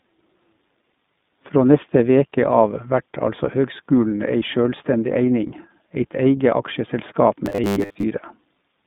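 Throughout the recording the speech carries the iLBC codec's narrowband character. Nothing passes above 4 kHz, and the usable band runs from roughly 150 Hz to 3.6 kHz, so sibilants and breath are dull. The coding damage is plainly audible as a rough, slightly synthetic texture. Each frame's excitation is coded on its own, with a frame rhythm and grain consistent with 20 ms frames and the 15.2 kbps mode.

From 7.46 to 8.04 s the speech turns into a rigid metallic buzz fixed at 100 Hz that only loosely tracks the syllables. The likely cause is new audio arriving too slowly, with playback filling the gaps by looping the most recent short buffer. A 100 Hz buzz fits a 10 ms chunk repeated back to back. About half of the audio in that stretch appears to be repeats, with the real signal in those gaps lost.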